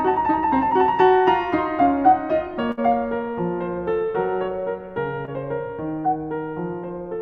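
A music recording with two network dropouts. The first, a burst of packet loss from 2.71 to 2.79 s, removes about 60 ms of the music. The receiver keeps the last sound going and fades it down, so a held buzz or dimming hiss briefly replaces the music. The music then picks up further on, with a section missing. What separates it from the later fault is that skip: the music jumps ahead rather than simply blurring. The second is a short concealed packet loss at 5.25 to 5.29 s, where roughly 20 ms never arrived in time. The receiver extends the preceding sound across the hole and blends straight back, producing a quick smear or wobble. It is far briefer than the first dropout.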